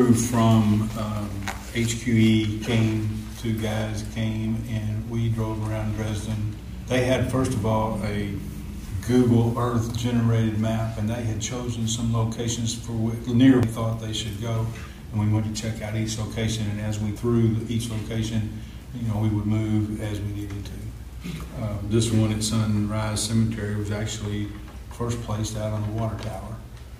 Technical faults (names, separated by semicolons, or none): damaged data in a compressed stream